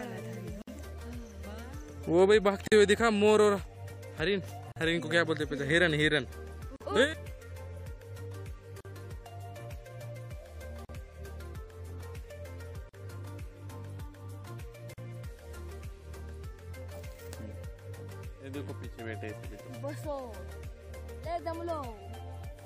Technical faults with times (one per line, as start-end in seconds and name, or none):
0.62-0.68 gap at a join of encoded pieces
2.68-2.72 gap at a join of encoded pieces
4.72-4.76 gap at a join of encoded pieces
6.76-6.81 gap at a join of encoded pieces
8.81-8.85 gap at a join of encoded pieces
10.85-10.89 gap at a join of encoded pieces
12.89-12.94 gap at a join of encoded pieces
14.94-14.98 gap at a join of encoded pieces